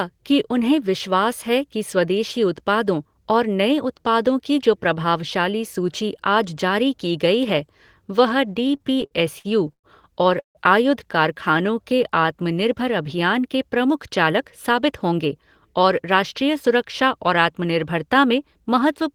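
From 8.63 to 9.87 s the speech has repeated stalls (stutter). Packets kept arriving late, so the jitter buffer ran dry eleven times. The receiver stretched the last sound over 283 ms, nearly a quarter of the span, with the longest gap 109 ms. Nothing is lost, but the speech drags and catches.

At 10.40 s comes a call audio freeze lasting about 0.18 s. The last sound is held briefly, then 120 ms of silence follows before speech resumes intact. The likely cause is packets held up in transit, which adds 152 ms of delay.

From 11.52 to 12.27 s a jitter buffer slow-down follows. The buffer needed a reserve, so the receiver repeated single pitch periods, adding 56 ms. The speech plays at 93% speed with unchanged pitch. Sounds are drawn out.

Two jitter buffer speed-ups come next, from 14.26 to 15.34 s and from 15.80 to 17.46 s. The buffer held too much audio. The receiver trimmed short pitch-period pieces, about a tenth of a second each time. 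The speech runs at 108% and then 105%, with pitch unchanged, and sounds hurried.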